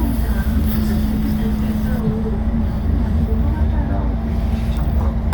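A recording of everyday sounds whose first two seconds, 0.0 to 2.0 s, carry pre-emphasis left on: the treble lift matching the FM 75 µs curve was applied and never undone by de-emphasis, leaving the top end about 13 dB hot at 10 kHz relative to 1 kHz, so everything sounds thin, bright and hissy. Unlike a fixed treble shelf, the boost starts near 2 kHz and keeps climbing with frequency, and it ends abruptly at 2.0 s.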